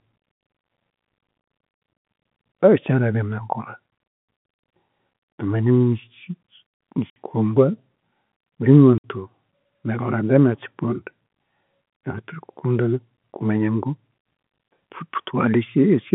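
Packet loss filled with silence hits this speech recording twice: the receiver lost a short run of consecutive packets and played nothing in their place, at 7.1 to 7.16 s and again at 8.98 to 9.04 s. Each hole lasts 60 ms, which fits three 20 ms packets going missing together. The sound drops abruptly to dead silence and returns just as suddenly. The narrow telephone band from the G.711 coding is audible throughout.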